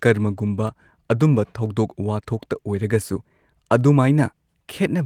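Dropped samples at 0.67 s, 1.66 s and 2.82 s: each is a single sharp click in this speech recording, a thin vertical line across the spectrum. Each is likely caused by a tiny fraction of a millisecond of samples missing from the stream, so the waveform jumps straight from one value to a later one. Too little is lost to remove any audible sound. The light 24 kbps Opus coding underneath keeps full bandwidth.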